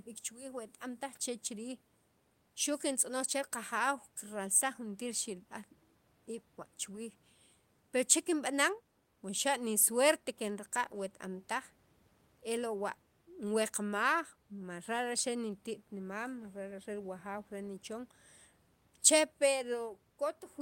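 No technical faults in this speech clip; the only background is room noise sitting about 39 dB below the speech.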